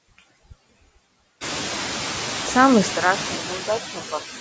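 Noise suppressor artifacts run through the whole clip. The suppressor pulls down whatever bands it judges to be steady noise, by about 10 dB, and re-decides this frame by frame. The room noise jumps by about 18 dB at roughly one and a half seconds and then sits only about 10 dB under the speech. Throughout, the suppression leaves background that dips in the gaps and swells back beneath the speech.

From 2.91 s to the end the sound abruptly narrows and dulls, with no gap at the transition. Some of the upper content is lost, although up to that point the call path had been passing audio up to 8 kHz. The level drops by a few decibels, and a different, low background appears far beneath the speech, roughly 35 dB down. This pattern points to the input likely having switched to a poorer device, such as another microphone or a headset call profile.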